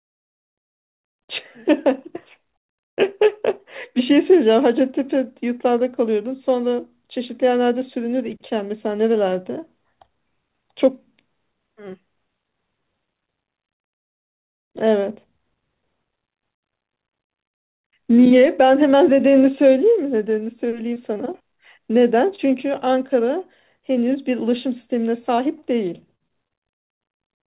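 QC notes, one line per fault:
20.94–20.98, 21.14–21.18, 22.36–22.40, 25.36–25.40, 25.60–25.63, 26.28–26.32, 26.48–26.52: short concealed packet loss. Each time one 20 ms packet failed to arrive in time, and the receiver filled about 16 to 25 ms by extending the preceding speech from its pitch or as shaped noise. This leaves a brief smear or wobble, and a short consonant can drop out.
26.15–26.22: burst of packet loss. About 40 ms of consecutive audio never arrived, and the receiver held the last sound for roughly 46 ms, fading it as the gap went on. The result is a short held buzz or hiss, after which speech resumes with that stretch missing. It sits within the late cluster of single-packet losses and through the call's 4 kHz-limited G.711 band.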